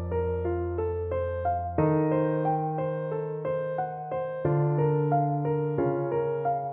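No audible technical faults anywhere in the audio.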